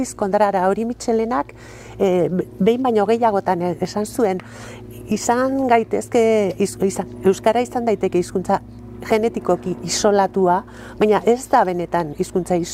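Clock drift between sender and receiver runs through the whole recording. The sender's clock runs a few percent fast, roughly 4 percent, so the receiver's buffer keeps filling. The sound carries a faint, restless unevenness in pace. On a waveform the timing looks subtly compressed rather than showing any single obvious break.

Repeated timing corrections follow from this, from 0.23 s to 12.59 s, at a speed of 104 percent. The receiver keeps trimming short pieces to keep up. These come through as small, unevenly spaced hiccups and a slightly hurried tempo. A spectrogram shows brief vertical seams where content is cut and spliced.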